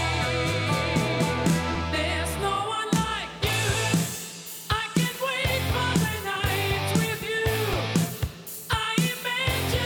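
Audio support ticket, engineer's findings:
Short skips at 1.75, 3.75, 5.74 and 7.73 s, each a tiny jump where a few milliseconds of sound vanish and the two sides butt together with no gap. Spacing a steady 2.0 s. Likely audio missing between chunks: capture or processing stage handling 2-second blocks, dropping a sliver at each block handover, then splicing the remainder straight on. Regular interval points to chunk boundary, not random network loss.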